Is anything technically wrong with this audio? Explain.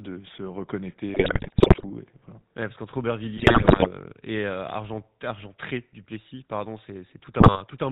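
Yes. The whole clip runs through the GSM full-rate codec, which fits a 13 kbps link. It rebuilds the voice from a vocal-tract model driven by sparse, regular pulses and drops everything above 4 kHz. That gives this speech an obvious buzzy, gravelly, band-limited roughness from start to finish.

On top of that there are GSM bit errors at 1.14–1.85 s, at 3.37–3.89 s just after "parce qu'entre", and briefly at 7.40–7.63 s. Corrupted bits reach the decoder and garble the filter, pitch and gain values. So the speech breaks up into squawks, pops and gargling in those stretches.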